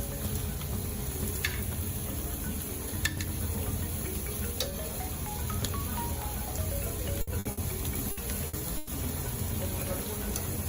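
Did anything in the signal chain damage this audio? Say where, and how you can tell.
Yes. The damage is in the network stage: a burst of packet loss, repeated six times. It occurs at 7.21–7.30 s, 7.39–7.48 s, 7.51–7.60 s, 8.11–8.20 s, 8.47–8.56 s and 8.77–8.92 s. In each gap the sound smears into a held buzz or fading hiss instead of continuing, then resumes further on with a piece missing. The receiver extended the last received sound to cover lost packets, about 60 ms each time and 120 ms in the final gap, with no silence left.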